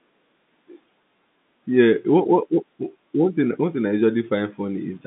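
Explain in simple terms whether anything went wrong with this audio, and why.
Nothing went wrong with this audio; it is speech that sounds as a normal phone call should, with the narrow, slightly muffled quality of a telephone line.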